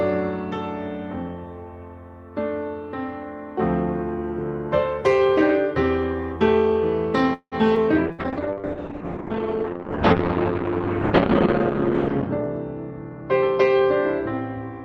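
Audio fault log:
7.33–7.55 s, call audio freeze: the sound stalls into a fading fill with about 80 ms of silence, then carries on intact, likely from delayed packets draining the jitter buffer.
7.76–7.79 s, skip ahead: a small forward jump with almost no gap, because about 70 ms of audio was dropped and the two sides were spliced together.
8.12 s to the end, call bitrate drop: the sound turns coarse and muffled as the encoder falls from 48 to 7 kbps, cutting the top from 20 kHz to 6 kHz.
8.12–8.21 s, burst of packet loss: a short held buzz or fading hiss, then a jump onward, because about 60 ms of consecutive packets never arrived in time.
8.32–8.99 s, jitter buffer slow-down: the sound drags slightly at unchanged pitch, running at 94% speed as repeated pitch periods add 45 ms to rebuild the buffer.
12.36–12.45 s and 12.91–13.81 s, jitter buffer speed-up: the sound rushes at the same pitch, first at 178% then 112%, as the buffer trims about 70 ms and 100 ms.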